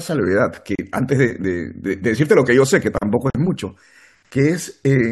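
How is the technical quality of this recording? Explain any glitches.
The speech is interrupted twice by short dropouts. At 0.75 s and 3.30 s, gaps at a join of encoded pieces open for about 34 ms and 47 ms. Each piece was encoded separately, so its start-up silence and padded final frame remain. On a waveform, a flat, slightly smeared hole appears; the spectrogram shows a vertical blank stripe before the sound resumes.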